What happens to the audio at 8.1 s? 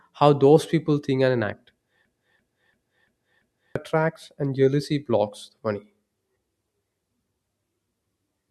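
Nothing goes wrong at 8.1 s: the speech carries on intact through that moment with no dropout, click or distortion.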